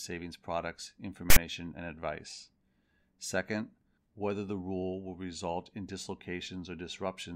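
At 1.30 s the speech is interrupted by file tags played as audio, lasting until 1.36 s. A block of text metadata is being decoded as if it were sample data. Text characters fall in a narrow range of byte values, so they produce a loud, coarse rasp pushed to one side of zero. It lasts about 60 ms. It starts and stops abruptly, with hard edges, like a short burst of harsh static.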